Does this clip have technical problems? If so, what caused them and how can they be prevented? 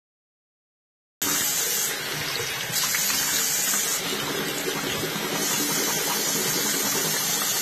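Yes. The audio has two faults.

Throughout the clip, nothing is present above 14 kHz, and the everyday sounds carry a blend of smeared, swirly high-frequency texture and a coarser, watery graininess. This is likely transcoding between lossy codecs: an earlier Vorbis encode followed by a low-rate AAC-LC re-encode. The second encoder spends bits reproducing the first one's artefacts and adds its own, and the 14 kHz ceiling is consistent with a chain ending around 32 kbit/s. To prevent this, encode once from a lossless source and never re-encode already-compressed audio.

A cut-off start: the clip is digital silence from 0.00 s until 1.22 s, where the sound appears abruptly already in progress, with no natural attack or fade-in. The capture or stream began partway through an ongoing sound, so its onset was lost and the waveform jumps straight from silence to mid-signal. To prevent this, start recording before the sound begins, or keep a pre-roll buffer so the onset is captured.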